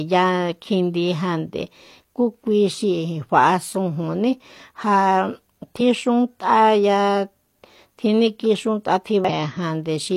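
At 5.76 to 5.82 s, and again at 9.25 to 9.30 s, the speech is broken by damaged data in a compressed stream. Each time, about 50 ms of the coded stream is corrupt, so the decoder misreads those frames and loses sync until it locks onto a valid header. Both are heard as a brief chirp, squawk, click or short hole. On a spectrogram each shows as a narrow vertical disturbance; the waveform shows an abrupt discontinuity.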